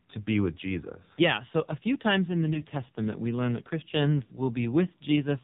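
From start to finish the speech passes through the AMR narrowband mobile codec, and the damage is heavy. The buzzy, synthetic voice fits a low rate around 5.9 kbps, where each 5 ms gets only a few excitation pulses to drive the vocal tract model. The sound is thin and telephone-like because 8 kHz sampling removes everything above 4 kHz. On a spectrogram this appears as a hard ceiling at 4 kHz, with coarse, blocky harmonics below it.

At 2.54 to 2.61 s, just after "few times in the", there are lost AMR speech frames. The brief warble and dip fit a single lost 20 ms frame. The decoder fills the gap by repeating the last good pitch and spectral settings at reduced gain. On the waveform this shows as a short amplitude sag, and on the spectrogram as a patch of frozen, smeared harmonics.

A longer loss of about 60 ms occurs at 4.24 to 4.39 s. The decoder stretches the previous sound and lets it fade, so the speech drags and thins before returning weak and rough for a moment. 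On the waveform the envelope tapers down and then recovers. On the spectrogram the harmonics stay flat and unchanging across the gap and dim toward its end.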